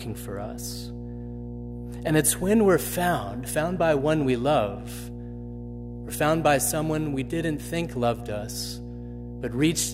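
Mains hum runs from the first instant to the end of this speech recording: a steady 60 Hz tone with a few low harmonics above it, sitting only about 10 dB below the speech, loud enough to be plainly heard under every phrase and in the pauses. The power line has leaked into the signal path, likely through a ground loop between connected equipment or from a transformer near the cabling, so the line frequency is recorded along with the voice.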